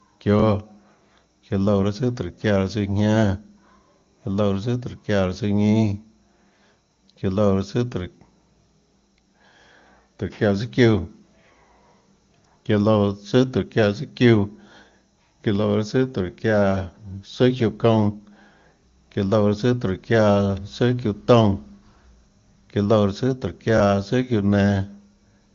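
Speech clip with two repeated buffers, at 18.81 s and 23.78 s. Each time, a 23 ms slice plays twice with hard joins, a brief stutter-click that fits a 1024-sample buffer replayed when new audio arrived late.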